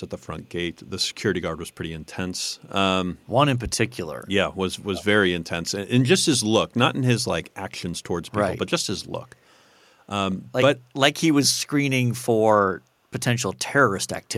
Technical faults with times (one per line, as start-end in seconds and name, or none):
4.94-5.04 echo leak